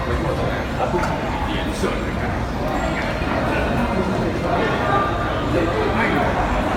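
No technical faults can be heard anywhere in the audio. Nothing in it stands out as a problem at any point.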